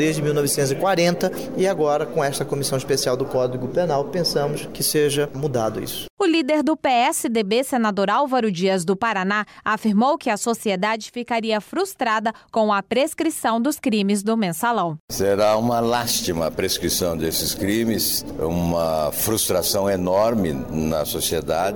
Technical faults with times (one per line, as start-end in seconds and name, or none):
none